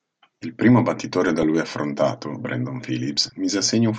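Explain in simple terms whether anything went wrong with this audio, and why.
MP2 compression is audible across the whole speech clip: it sounds dull and gurgly and grainy. This is likely from squeezing the audio too hard, so the coder shuts off whole bands of high frequencies and stores the remaining ones only roughly.

DAB burbling appears from 1.27 to 1.44 s and again from 3.17 to 3.32 s as brief bursts of burbling. Weak reception let a small share of corrupted data slip past error correction, so individual frequency bands got short blips of noise.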